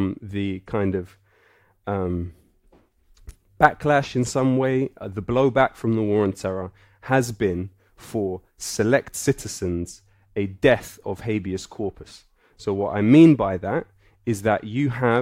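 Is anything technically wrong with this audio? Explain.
No, nothing in this speech recording points to a technical fault.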